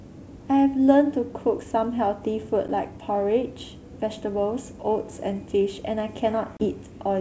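Packet loss on an ADPCM call hits at 2.68 s and again at 6.57 to 6.65 s: about 10 ms, then roughly 30 ms, go silent. The decoder's predictor and step size drift from the sender's, so the wideband G.722 speech resumes slightly distorted before settling.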